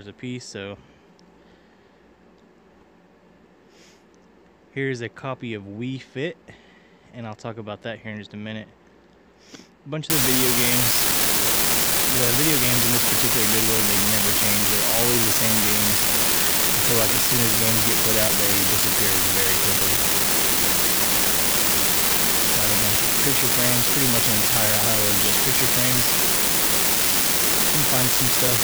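From about 10.10 s to the end at 28.64 s there's an unreliable data bit: one marginal line flips randomly, throwing identical spikes around -8 dBFS, a constant crackly fizz.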